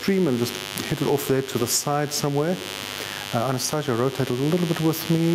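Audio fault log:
throughout, mains buzz: A steady, raspy buzz sits under the whole clip, about 15 dB below the main signal, so it is clearly audible rather than a faint hum. Its harshness comes from sharp switching spikes entering the path twice per cycle of the 50 Hz mains, perhaps from a dimmer, a rectifier or a missing shield. Those spikes spray harmonics of 50 Hz up into the kilohertz range, which turns a low hum into a gritty edge.
throughout, gain pumping: The gain swings by around 10 dB, which makes the audio sound squashed, with loud and soft passages pressed unnaturally close together. The likely cause is input gain set far too high for the microphone, with a fast limiter or compressor clamping down on every loud moment. Because that clamp releases between loud moments, the gain rises back up each time.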